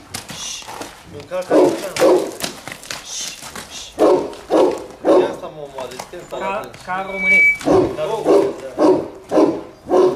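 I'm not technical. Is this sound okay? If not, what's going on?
No. Around 7.06 seconds, a microphone began picking up the loudspeaker it was feeding, so the sound kept looping round and getting louder each time. That is loudspeaker feedback squeal. You hear it as a single high whistle, near 2.3 kHz, that swells up over roughly a third of a second and rises above the rest of the sound, then stops at about 7.64 seconds.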